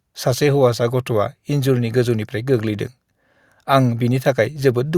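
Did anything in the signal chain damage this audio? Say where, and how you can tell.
No, nothing in the chain audibly damaged this speech.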